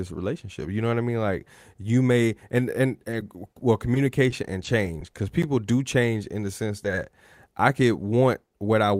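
A speech clip with two tiny ticks or smears right after "you may and and", at 3.11 to 3.13 s and 3.20 to 3.22 s, and a third at 6.83 to 6.85 s. Each is short concealed packet loss: about 10 ms of audio arrived too late, and the receiver bridged the hole by extending the preceding sound before blending back in. From 3.59 to 5.15 s, leading into "because people do change", the sound stays intelligible but hiccups repeatedly. These are scattered short gaps, roughly ten separate losses of about 10 ms each, together patching around 7% of that stretch with continued sound.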